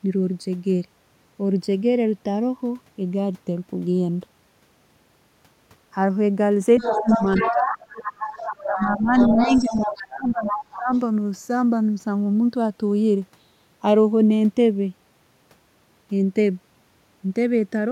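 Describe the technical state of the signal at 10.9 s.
At 10.9 s the speech is in the last moments of a dip that runs from 9.34 s to 10.92 s. Its level falls by roughly 20 dB at the deepest point and it is turned down over stretches totalling about one and a half seconds. This is speech suppressed in double talk. The likely cause is an echo canceller that, with both sides talking at once, could not tell the near talker from loudspeaker echo and turned everything down. Unlike a plain dropout, the loss recovers as the overlap ends.

Straight after, from 10.93 s to 10.99 s, a brief faint scrap of a second voice appears, some 35 dB below the main speech. This is the other side's voice leaking through, likely residual loudspeaker sound the echo canceller failed to remove.

Underneath both, and present at this moment as in the whole clip, is channels drifting apart. The two channels run on clocks that disagree by something like 50 parts per million, so the offset between them grows slowly, to around half a millisecond by the end. 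In mono the resulting comb notches creep through the spectrum as a gentle flanging sweep. That steady, gradual movement separates it from a fixed comb filter, whose colour would not change.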